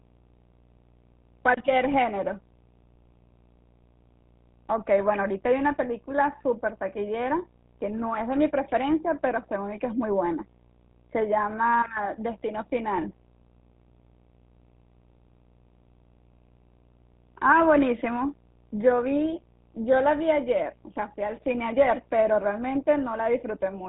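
Video or display buzz runs from start to finish: a screen or video cable couples a 59.94 Hz field-rate buzz, hash, and a thin 15.7 kHz line tone, roughly 30 dB below the speech. GSM full-rate codec damage also runs throughout. The speech is rebuilt from a vocal-tract model and pulse excitation, which fits a 13 kbps coder, leaving a plainly gravelly, buzzy roughness and nothing above 3.8 kHz.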